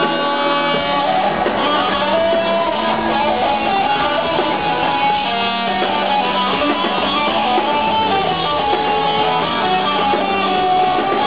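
No technical faults can be heard anywhere here.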